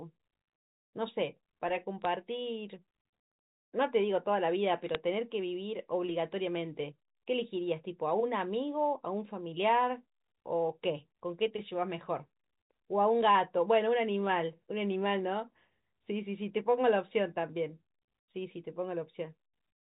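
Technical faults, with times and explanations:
2.02–2.05 s, 4.84–4.95 s and 13.23–13.27 s: bit errors on a digital phone line. Brief bursts of sharp ticks and crackle sit over the speech. Each flipped bit corrupts a single sample of the G.711 stream, and hits on the sign or high-order bits jump the waveform, producing a click.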